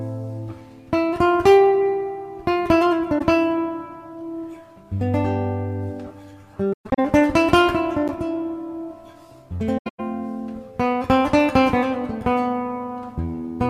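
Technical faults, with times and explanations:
3.18 s, 6.73 to 6.99 s, 9.78 to 10.00 s: AAC frame loss with muting. The decoder zeroed lost frames. One frame of about 21 ms goes at 3.18 s. Later, about 190 ms drops out in patches each time, the longest gap near 150 ms, then 100 ms. Overlapping windows make soft-edged holes.
8.08 s: block of digital silence. For about 12 ms the signal drops to silence, which fits a 512-sample buffer left unfilled in time. The signal cuts out and back with no fade, heard as a brief tick.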